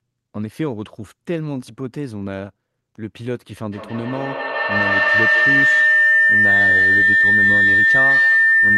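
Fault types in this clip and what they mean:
Feedback howl: a loop through a loudspeaker and a microphone in the same room gains level on each pass, so the repeats swell rather than die away and collapse onto the one frequency the loop favours, here around 2 kHz. From 3.72 s to the end it climbs to about 10 dB above the speech, with the loop repeating roughly every 150 ms. A spectrogram shows a narrow horizontal line near 2 kHz; the waveform grows into a fat, swelling envelope.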